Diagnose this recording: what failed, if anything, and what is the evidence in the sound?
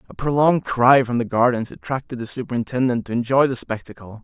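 No fault detected in this recording.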